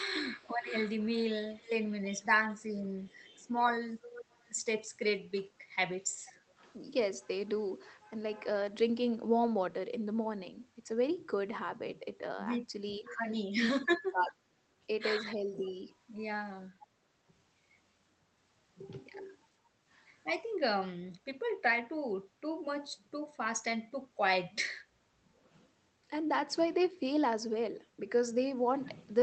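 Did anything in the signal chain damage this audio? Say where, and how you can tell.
Yes. The damage comes from the call-processing stage, in the echo canceller, and it shows up in three ways.

Speech suppressed in double talk: the echo canceller was likely unable to tell the local talker from loudspeaker echo while both sides spoke, so it turned everything down. From 0.2 to 3.43 s the speech dips in pieces totalling around a second, by as much as roughly 15 dB. From 12.99 to 15.83 s it dips again for about half a second in total, bottoming out near 20 dB down.

Echo leak: residual loudspeaker pickup likely got past the canceller and was sent back. The evidence is a delayed copy of the speech trailing the original by 495 ms. It is clearest from 0.4 to 6.73 s, at roughly 15 dB under the direct speech. A brief scrap appears at 13.05–13.17 s, around 20 dB down, and a fainter tail runs from 15.66 to 16.87 s, about 25 dB down.

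Background gated by the echo canceller: during loudspeaker activity the canceller clamped the microphone hard, so the room tone ducks and then recovers once it releases. The first duck is at 19.66–19.79 s, lasting around 150 ms and dropping about 10 dB. The second is at 24.83–25.12 s, lasting around 300 ms at about 9 dB. These are short holes in the ambience rather than losses in the speech. The Opus call path limits the top end to 8 kHz.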